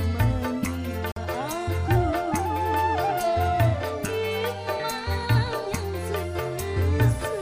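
At 1.12 s the sound drops out completely for about 60 ms, ending at 1.18 s. When it returns, it does not pick up where it stopped but jumps ahead, as though it had kept playing through the silence. This is most likely a Bluetooth dropout: a couple of audio packets failed to reach the headphones in time and were discarded, so the output fell silent until valid data arrived again.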